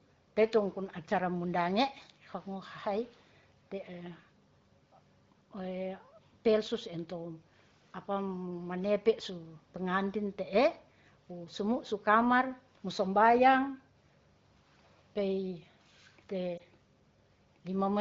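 At 16.57 to 16.62 s the speech has a short dip or warble. This is a lost AMR speech frame, which fits a single 20 ms gap. The decoder filled it by reusing the previous frame's pitch and vocal tract settings at reduced gain. The surrounding speech has the clarity of AMR wideband coding at a higher rate.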